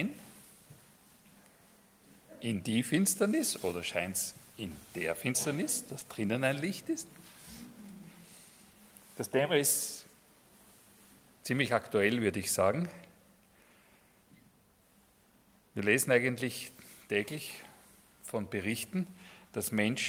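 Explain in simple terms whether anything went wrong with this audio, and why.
Short concealed packet loss at 5.99 to 6.03 s: about 20 ms of audio arrived too late, and the receiver patched the gap by extending the preceding sound, leaving a brief smear.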